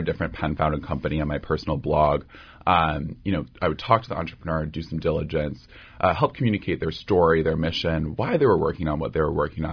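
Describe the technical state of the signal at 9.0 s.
At 9.0 s the speech is intact, with no audible technical fault at that point.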